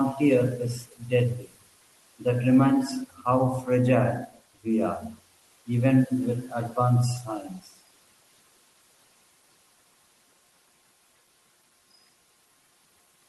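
Throughout, noise suppressor artifacts: the room noise is pulled down by about 17 dB between phrases and swells under speech; spectrograms show a pumping noise floor.

At 0.76–1.12 s and 1.35–1.63 s, speech cut by the noise suppressor: speech mistaken for noise drops by up to about 19 dB and sounds swallowed, visible as abrupt waveform dips.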